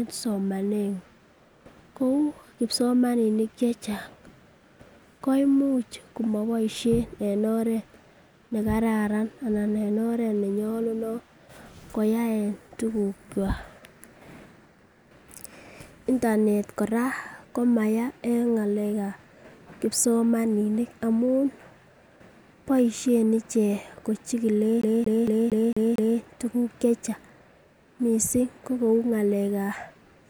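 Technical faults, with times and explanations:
24.82–26.19 s, CD stuck on one turn: a scratch on the disc keeps knocking the laser back one track at the same point of each rotation, so the player reads the same stretch of data over and over. The speech locks onto a 228 ms fragment that repeats six times, each pass broken by a brief mute where the pickup jumps, giving the rapid, evenly spaced stutter of a skipping CD before playback recovers at "tuguk che chang".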